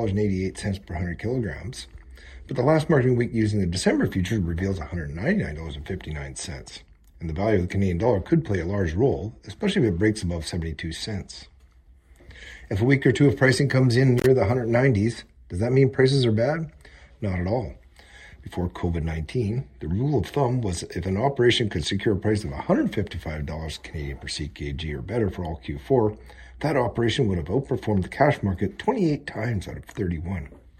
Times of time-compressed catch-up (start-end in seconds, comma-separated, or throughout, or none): none